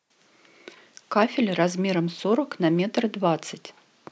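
No technical faults can be heard in this recording.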